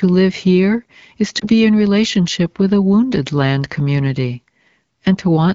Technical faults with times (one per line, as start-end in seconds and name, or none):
1.39-1.45 lost AMR speech frames